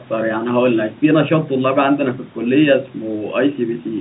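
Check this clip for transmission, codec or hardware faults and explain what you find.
No transmission, codec or hardware faults are audible here.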